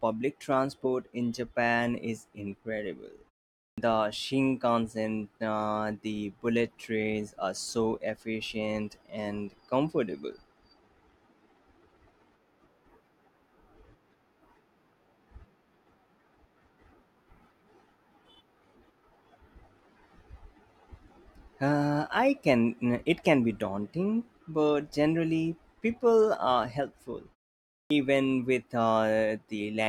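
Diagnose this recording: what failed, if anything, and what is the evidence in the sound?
Playback stage: a clipped start after a pause. At 3.72 s and 27.85 s, after silences of 0.5 s and 0.58 s, speech starts abruptly with its first 57 ms and 54 ms missing, as the sleeping output device wakes late.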